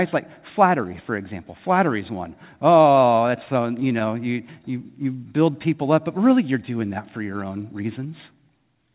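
Scattered short gaps run from 2.74 to 4.02 s, right after "is one". Around seven small packet losses fall one at a time across this stretch, none longer than about 15 ms, together only around 70 ms or roughly 7 percent of the span. The receiver covers each hole by carrying the previous sound forward, so the speech stays clear but picks up brief ticks, tiny smears and the occasional hiccup instead of silent dropouts.

A jitter buffer slow-down follows from 4.33 to 5.53 s, ending just before "people up but really". The receiver's buffer was running short or had just raised its target delay, so it rebuilt its reserve by repeating single pitch periods and slivers of pauses many times over, adding 82 ms. The speech plays at 94 percent speed with unchanged pitch, so syllables sound drawn out.

A jitter buffer speed-up comes at 7.56 to 8.06 s, just after "doing that for your". Here the buffer held more audio than its target, so the receiver trimmed away short pieces of one or a few pitch periods in quick succession, around 70 ms in all. 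The speech runs at 110 percent speed at the same pitch and sounds briefly hurried. Throughout, the narrow call-codec sound with nothing above 4 kHz fits G.711 mu-law at 64 kbps.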